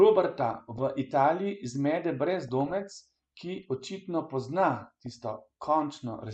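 Speech interrupted by short blips of noise from 0.40 to 0.79 s, 2.48 to 3.01 s and 4.81 to 5.16 s. This is DAB burbling: weak reception let bit errors, under half a percent, slip past error correction, so wrong samples put short noise blips into single MP2 sub-bands.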